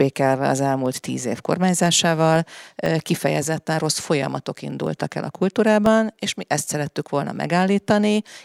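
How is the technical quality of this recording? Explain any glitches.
The recording has a recurring glitch: periodic USB or driver dropouts run from about 0.86 s to 8.36 s, once every 0.5 s, roughly fifteen times. Something on the system stalls the USB bus or audio driver on a fixed schedule, and each stall replaces a tiny slice of audio, around half a millisecond, with silence. In the speech, each gap is a small tick. The strict half-second spacing separates it from random clicks or irregular buffer underruns, and the ticks vanish when no signal is present.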